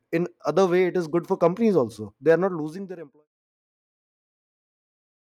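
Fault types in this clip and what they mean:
No technical faults can be heard in this speech.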